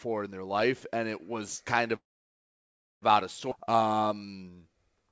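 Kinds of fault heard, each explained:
Call audio freeze: from 1.96 to 3.04 s, after "and it was kind", about a second of silence, likely a stalled jitter buffer; "out of" then resumes with nothing lost.
Skip ahead: at 3.50 to 3.53 s, just after "out of", playback jumps forward, dropping roughly 0.7 s of speech and joining both sides almost directly.
Jitter buffer slow-down: from 3.57 s to the end, repeated pitch periods add 237 ms, so speech runs at 85% speed with unchanged pitch and stretched sounds.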